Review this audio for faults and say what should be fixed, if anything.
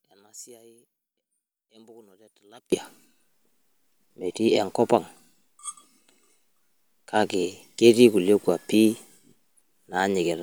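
One channel inverted, from 0.0 to 2.72 s: the speech collapses by about 30 dB to a faint residue, likely because one stereo channel has reversed polarity, so the shared centre content cancels when the channels are summed. Fix it by re-inverting that channel for this span, and check polarity and mono compatibility on every channel before export.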